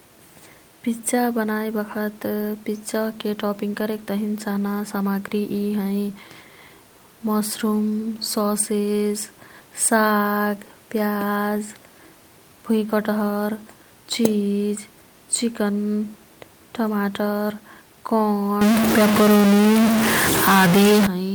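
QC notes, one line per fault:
18.61 to 21.07 s, stuck bit: one data line in the sample path appears frozen at a fixed value, likely from a broken connection or converter fault, so about half of the samples land off by that bit's weight in a pattern that follows the waveform. The speech turns distorted, and the quiet gaps, where the room noise otherwise sits about 36 dB below the speech, fill with a gritty hiss.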